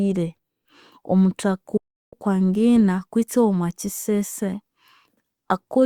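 A digital broadcast dropout cuts into this speech clip from 1.77 to 2.14 s. After a fast fade of about 8 ms, the receiver mutes for roughly 0.35 s, which fits around eleven frames that failed to decode. That programme is lost, and the sound returns once valid frames resume.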